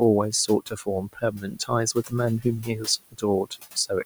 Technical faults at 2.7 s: noise suppressor artifacts; speech cut by the noise suppressor

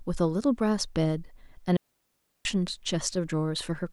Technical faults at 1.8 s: digital wireless dropout

